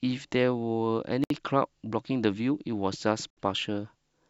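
Speech with a gap at a join of encoded pieces, at 1.24 to 1.30 s (64 ms) and 3.30 to 3.37 s (67 ms), two seconds apart. Untrimmed encoder delay and end padding leave short silences. Unlike a dropout, speech resumes exactly where it stopped, with nothing missing.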